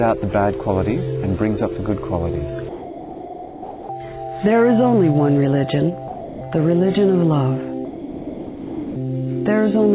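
From 2.69 to 3.89 s, 6.08 to 6.41 s and 7.85 to 8.96 s the sound gives way to steady, featureless noise. This is likely sound dropped by the voice detector, with comfort noise filling each gap. Packet-loss concealment would instead produce warbling or repeated fragments.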